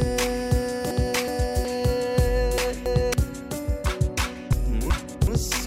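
At 0.91–1.65 s, 2.58–3.14 s and 4.53–5.27 s the audio has frames out of order: two adjacent blocks arrive swapped and are decoded as received, so each stretch plays its second half before its first. The blocks are about 0.37 s, 0.28 s and 0.37 s long, which fits runs of four, three and four frames. Each swap sounds like a garbled flutter, and no time is lost.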